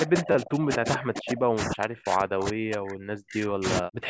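From 0.02 s to the end, the speech dips and breaks up, likely speech suppressed in double talk as an echo canceller turns it down. The spectrogram shows gaps and faded bands, with drops of up to about 40 dB.

At 0.32 to 0.35 s a repeated buffer gives a click or brief buzz: one short piece, about 10 ms long, plays three extra times. The waveform shows identical repeating cycles with hard joins.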